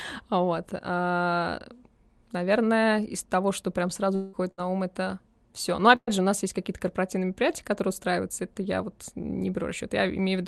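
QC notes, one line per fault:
4.15–4.36 s, long network dropout: the sound stops arriving for about 0.2 s and is carried on as a fading buzz or hiss for roughly 180 ms, with no drop to silence. Its length and the decay into noise, rather than a brief held tone, set it apart from a short burst, and a network outage is the likely cause.
4.51–4.61 s and 5.96–6.10 s, burst of packet loss: two short gaps of about 60 ms and 120 ms are bridged by continuing the last sound and turning it down, so it comes out as a held buzz or hiss and then resumes further on. The second gap ends in about 40 ms of silence. The gaps are brief, and the sound picks up right after the fill, which separates these from the longer dropout.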